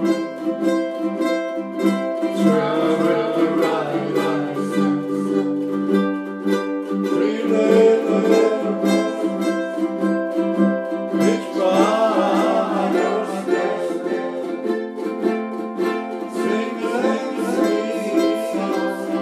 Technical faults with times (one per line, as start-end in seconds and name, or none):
0.00-19.21 doubled audio track